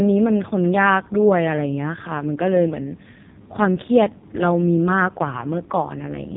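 From start to finish the speech carries the sound of an AMR narrowband mobile codec, squeezed hard enough that the voice turns buzzy and synthetic, which fits the AMR-NB 5.15 kbps mode. The codec rebuilds each 20 ms frame from a vocal-tract model fed by sparse pulses, so fine detail is lost. Nothing above 3.8 kHz survives: a spectrogram shows a flat ceiling there, with smeared, blocky harmonics below it.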